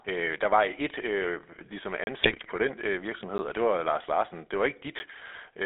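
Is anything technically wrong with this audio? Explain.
Yes. The whole clip of speech has passed through the GSM full-rate codec, heard as a buzzy, gravelly roughness throughout. The codec drives a vocal-tract model with a thinned-out pulse excitation at about 13 kbps, and the line band stops near 3.7 kHz, so nothing bright survives. Unlike bit errors, this coloration is steady rather than bursting.

Three blocks of digital silence cut in: 2.04 to 2.07 s, just after "var et øh ligesom" (a 30 ms hole), then 3.38 s after "den øh virksomhed" and 5.0 s (each about 10 ms, heard as ticks). The sound cuts out and returns without a fade, distinct from codec damage because the sound vanishes completely.

GSM bit errors hit from 2.23 to 2.5 s, before "den øh virksomhed og". Corrupted filter, pitch and gain values reached the decoder across about 13 frames, at roughly 3% errors, producing squawks and gargling rather than silence, which separates it from the dropouts.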